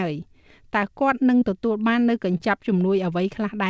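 At 1.40 to 1.43 s and again at 2.37 to 2.41 s, short concealed packet loss leaves a brief smear: about 20 ms of audio arrived too late, and the receiver stretched the preceding sound before blending back. Unlike a plain dropout, there is no silent gap.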